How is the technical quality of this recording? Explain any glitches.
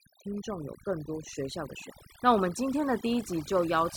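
The recording has one problem throughout: overdone noise removal. Aggressive denoising shuts individual frequency bands near the noise floor, leaving twinkling specks in near-silence, unlike a broadband gate's abrupt pumping.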